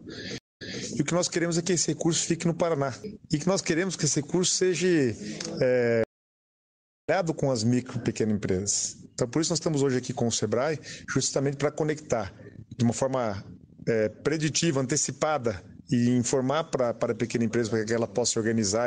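A stream reconnect hits at 0.38 s: the connection drops, leaving about 0.2 s of silence, and a fresh decoder picks up around 0.24 s earlier, so material repeats up to 0.81 s. A second reconnect runs from 6.04 to 7.09 s, with nearly 1 s of silence, and resumes roughly 0.7 s later, skipping ahead. On a waveform each gap is a flat line. A spectrogram shows a blank vertical band with a soft edge where sound fades back in.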